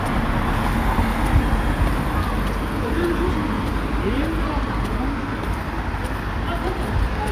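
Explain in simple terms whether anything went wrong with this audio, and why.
Nothing went wrong here; it's just the recording as it was captured, with no hiccups or glitches anywhere along the way.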